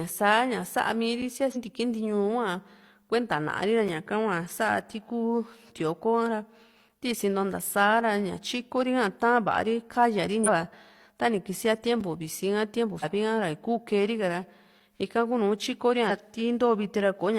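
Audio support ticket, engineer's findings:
Compressed frames skipped, four instances. 1.52–1.57 s: jump in the speech, roughly 300 ms of speech missing. 10.43–10.49 s: same signature, roughly a second lost. 12.99–13.04 s, right after "visi ka tiempu": roughly 200 ms gone. 16.06–16.11 s: roughly 700 ms gone. Each jump fits a whole number of ~43 ms codec frames, pointing to frames missing from the file or rejected by the decoder. Spectrogram shows harmonics and formants stepping abruptly to new positions. Waveform shows an envelope discontinuity with no dropout to silence.

Gap between chunks at 12.01 s, just before "visi ka tiempu". Hard-edged hole of 6.5 ms, no audio lost. Falls on a 3 s boundary, consistent with chunked delivery where codec padding or late chunk start inserts silence. Waveform shows a near-silent run with abrupt edges. Spectrogram shows a thin, clean vertical white stripe across all frequencies, bordered by broadband edge ticks.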